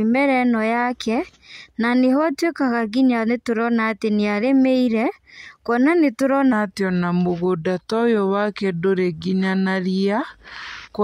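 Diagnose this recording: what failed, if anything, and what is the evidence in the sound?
From 6.53 s to the end, the speech turns slow and deep. It runs at 0.863 times normal speed and drops about three semitones. That is a section at the wrong speed. The likely cause is playback or editing run against a mismatched sample clock.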